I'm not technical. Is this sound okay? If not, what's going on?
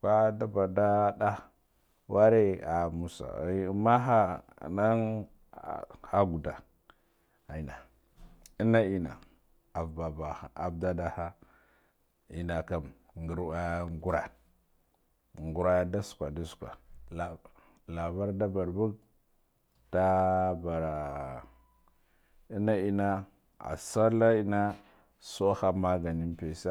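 Yes, this speech recording is okay, and nothing in it sounds broken or faulty. There's nothing here that needs fixing.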